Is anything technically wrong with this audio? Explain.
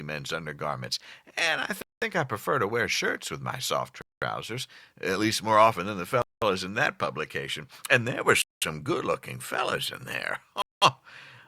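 Yes, there is a gap between chunks at 1.82, 4.02, 6.22, 8.42 and 10.62 s: 200 ms silences after every 2 s of audio, where the speech pauses and then resumes without missing anything, unlike a dropout.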